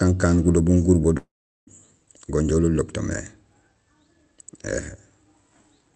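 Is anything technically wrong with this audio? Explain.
Yes. A long network dropout, at 1.17 to 1.69 s, is the likely cause: the speech stretches into a fading buzz, then about 0.39 s of silence, and resumes with roughly half a second missing. The call codec path caps the top end near 8 kHz.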